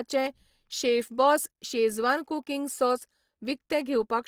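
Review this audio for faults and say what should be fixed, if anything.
Throughout the speech, the sound is rough and grainy, with tonal parts turning noisy, though the top end still reaches about 20.4 kHz. This is likely Opus compression in its music mode, which fits a rate around 24 kbps, too low to code every band cleanly. Prevent it by encoding at a higher bitrate or keeping a lossless master.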